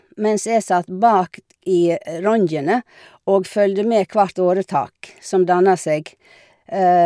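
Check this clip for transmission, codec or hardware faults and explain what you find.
No faults detected in this speech.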